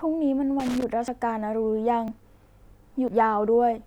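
Starting at 0.60 s and running to about 0.84 s there's a burst of loose connector crackle over the speech: an irregular scratchy rattle, like a worn or dirty contact shifting in its socket. As the contact makes and breaks, the signal gets chopped on and off in quick succession, and any DC sitting on the line adds pops. It lasts about a quarter of a second.

After that come three jumps at 1.08 s, 2.08 s and 3.08 s, exactly one second apart. At each one the speech jumps forward with no gap of silence, as if a chunk was cut out and the two ends spliced together. The likely cause is a dropped buffer (overrun): the software didn't collect a block of samples before the hardware wrote over it. The first two jumps lose something like 40 ms, and the last one loses a bit more, around 70 ms.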